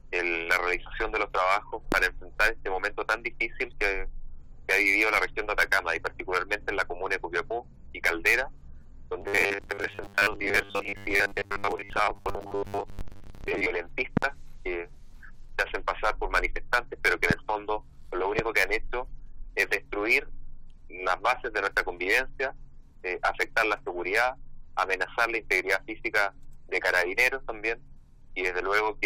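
Sharp pops stand out about 20 dB above the audio at 1.92 to 1.95 s, 17.31 to 17.33 s and 18.39 to 18.41 s, with a quick double pop at 14.17 to 14.25 s. The likely cause is a loud pop from an electrical step or glitch, such as a switch, static or driver fault, riding on top of the sound. From 9.21 to 13.66 s the audio turns into a rigid metallic buzz at 100 Hz that only loosely follows the sound beneath it. This is robotic sound from repeated short buffers, likely caused by new audio arriving too seldom. The gaps are filled by replaying a block of about 10 ms, and roughly 70 percent of that stretch is repetition rather than real audio.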